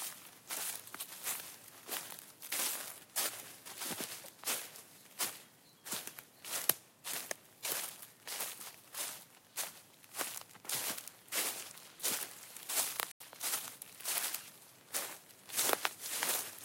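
A Bluetooth stall cuts this recording of sounds to silence at 13.12 s for about 87 ms, until 13.20 s, after which the audio resumes. The likely cause is interference delaying wireless packets, so the headphones' buffer ran empty and playback waited for the retransmitted data.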